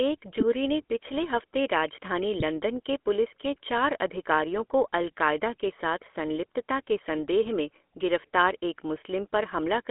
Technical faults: GSM full-rate codec; GSM bit errors

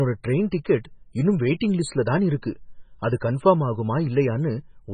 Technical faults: MP3 compression

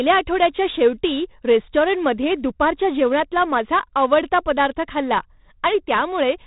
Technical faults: 4-bit ADPCM compression

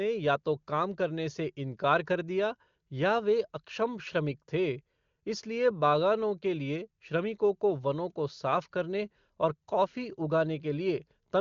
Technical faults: none

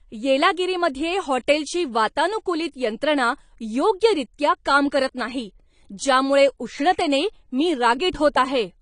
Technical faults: AAC compression

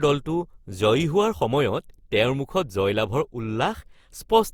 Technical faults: generation loss

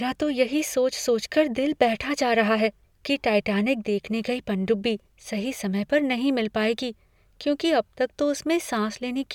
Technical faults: none

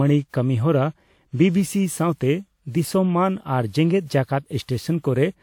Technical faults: generation loss

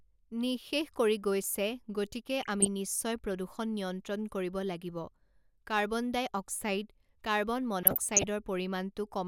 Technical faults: DAB burbling

